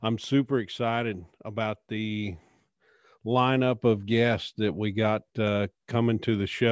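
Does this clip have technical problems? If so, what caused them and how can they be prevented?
No, no technical faults here.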